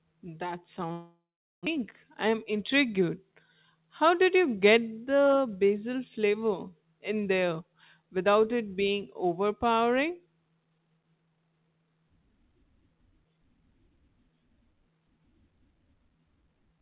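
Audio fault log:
0.92–1.69 s, long network dropout: the sound breaks off into a fading continuation, then about 0.42 s of near silence before audio resumes with roughly 0.6 s simply gone. This is likely packets lost in transit, with the receiver concealing the gap before giving up.
1.77–3.11 s, jitter buffer speed-up: the speech runs about 8% fast and sounds hurried while its pitch stays put. Audio that built up after the gap was trimmed away, roughly a tenth of a second in total, by cutting many short pitch-period pieces.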